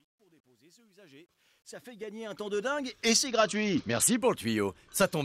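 The audio opens with a fade-in that sounds gritty rather than clean, with truncation distortion from 0.0 to 3.15 s. It is harshest from 0.0 to 1.82 s, where the faint sound is at its grittiest. The fade stage discards low-order bits without dither, so at these tiny levels the waveform collapses into a few coarse square steps, which fits a path keeping only about 10 bits. From 3.27 to 4.17 s the treble dulls and a gritty haze rises before the sound recovers. This is a Bluetooth SBC bit pool drop. The sender cut the bits per block, which fits a fall in bit pool from 28 to 8 and a rate near 72 kbps. That leaves the upper sub-bands nearly empty and the lower ones coarsely quantised.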